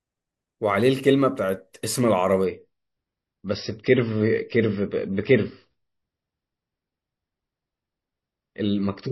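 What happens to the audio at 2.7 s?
At 2.7 s you're already inside a drop to a lower bitrate in the adaptive stream. From 2.44 s to the end at 9.11 s, the player switched to a much leaner encode, consistent with something like 24 kbit/s MP3 after 128. There's no gap, just a sudden change: the treble vanishes above about 5.8 kHz and the speech picks up a swirly, smeared codec texture.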